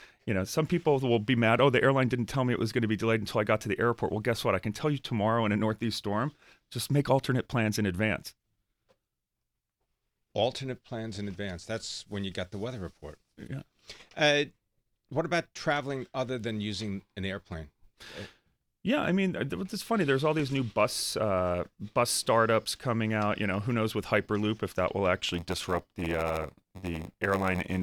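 From 25.28 s to the end, after "if that will", one stage is handing over blocks shorter than the next stage reads, and the shortfall in each block is filled with zeros. This block size mismatch (padded) leaves a brief silence in every block, and the result fits a 512-sample read. The speech takes on a buzz at about 93.8 Hz, the block rate, and runs slower at 0.938 times normal speed while keeping its timbre.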